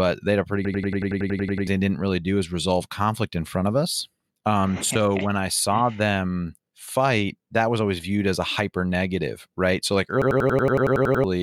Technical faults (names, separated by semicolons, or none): system hang loop